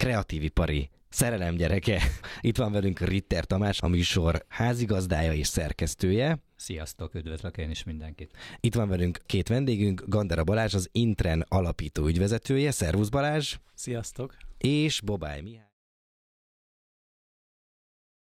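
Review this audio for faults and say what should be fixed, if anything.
Nothing here needs fixing, and the gentle fade-out near the end, easing in from around 14.5 s and finishing at 15.74 s, is just a smooth editorial touch.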